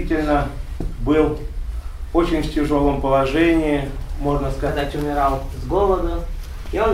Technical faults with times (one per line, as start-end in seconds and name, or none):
4.68-6.94 section at the wrong speed